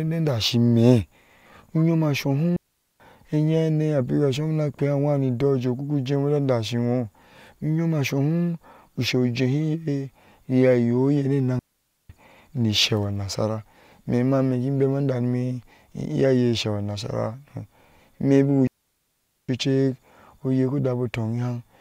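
At 2.56, 11.59 and 18.67 s the speech drops into near silence. These are digital wireless dropouts. The receiver lost too much data and muted fast. The holes last about 0.44, 0.51 and 0.81 s. No noise burst surrounds them.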